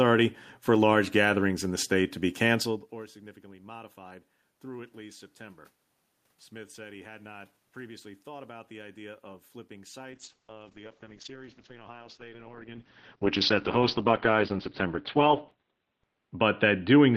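Right after "the idea of flipping", at 10.13 s, a call bitrate drop sets in: the top end collapses from 20 kHz to about 4 kHz, sounding muffled and watery, which fits roughly 8 kbps.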